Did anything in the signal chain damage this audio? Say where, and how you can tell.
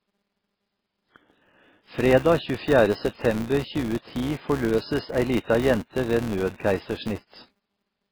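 Yes. The codec stage did the most damage. The audio was likely squeezed through MP3 at a very low bitrate, which fits something around 16 kbps. The encoder, starved of bits, dropped weak frequency lines and let others flicker between frames. That leaves heavy watery, swirling texture on the voice, with sibilants turning metallic and chirpy.

A processing stage is also restarting a filter on every block. Each block starts from a zeroed filter state instead of carrying on from the previous one, so every boundary adds a small click. Those clicks recur 200 times per second, which points to blocks of about 5 ms. Together they form a steady 200 Hz buzz under the whole clip. It rises and falls with the speech level, loudest on strong syllables and fading in quieter stretches.

Pre-echo shows up at three sharp onsets: 3.15 to 3.19 s, spreading about 35 ms ahead of the attack, then 5.43 to 5.48 s and 6.55 to 6.60 s, each spreading about 49 ms. 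In each case a loud attack landed late in a transform block. The codec spread its quantisation noise across the whole block, including the silence before the onset. You hear a short hiss arriving just ahead of each attack, and the attack itself sounds softened and smeared.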